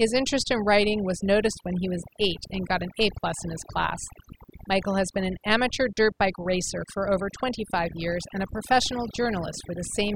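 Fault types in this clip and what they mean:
Overdone noise removal: the noise reduction on this speech was pushed way too hard, so it's knocking individual frequency bands down or out whenever they sit close to what it thinks the noise floor is. Trouble is, the softer parts of the voice live down there too, so they get scooped out along with the noise. All the way through the clip, the background drops and breaks up into little twinkly, warbling specks.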